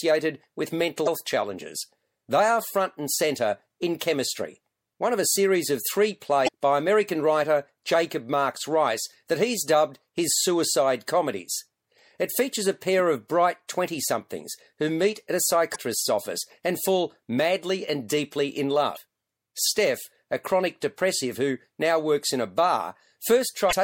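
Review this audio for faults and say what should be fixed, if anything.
The speech has a watery, swirly quality with dulled treble, likely from MP3 compression at a low bitrate, around 64 kbps. On a spectrogram this appears as a hard high-frequency ceiling and flickering patches in the upper bands. Encoding at a higher bitrate, or keeping an uncompressed master, would prevent it.

Damaged data in a compressed stream causes five brief glitches, each about 40 to 50 ms long: 1.03–1.08 s; 6.44–6.49 s, right after "a series of three"; 15.72–15.76 s, between "who meet at a" and "office and fall madly"; 18.93–18.97 s, after "madly and deeply in"; and 23.68–23.73 s. At each one the decoder misreads frames and resynchronises on the next header. The waveform shows a short discontinuity. Checksummed transfer and re-encoding from an intact source would prevent these.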